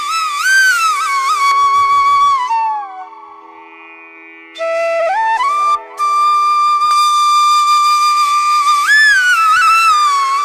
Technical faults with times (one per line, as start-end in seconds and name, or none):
1.51-6.91 de-emphasis applied wrongly